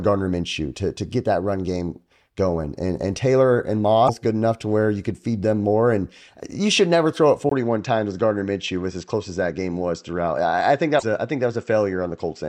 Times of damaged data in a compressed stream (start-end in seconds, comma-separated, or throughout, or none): 4.04-4.09, 10.96-11.03